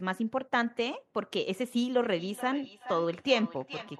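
From 1.99 s to the end, feedback echo between two devices: speech replayed by a second device is picked up again by its microphone. Repeats arrive roughly every 0.4 s, peaking about 13 dB below the speech, showing as evenly spaced copies of syllables on the spectrogram.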